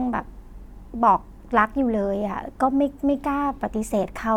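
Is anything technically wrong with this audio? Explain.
No, nothing technically wrong can be heard here.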